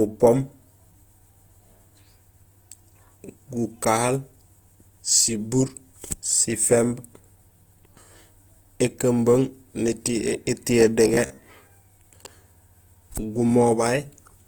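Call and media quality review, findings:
Speech grainy, rough and noisy throughout. Bandwidth stays full. The likely cause is Opus compression in CELT music mode, consistent with around 24 kbps. Band energies are preserved, but starved bands are filled by folding or noise, giving grit rather than swirl.

11.08–11.43 s: speech turns into a rigid metallic buzz near 66.8 Hz that still loosely follows the syllables. This is robotic sound from repeated short buffers, likely in the playout or jitter-buffer path. The last chunk, about 15 ms, is looped while fresh audio is skipped, covering roughly two-fifths of the span.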